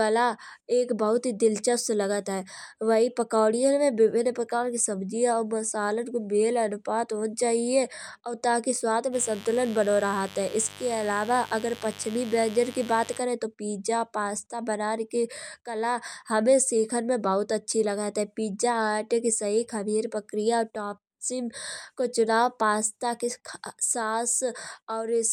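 From 9.11 to 13.21 s, mains buzz enters the speech: switching spikes from a 50 Hz supply leak in, adding a steady, raspy buzz about 20 dB below the voice.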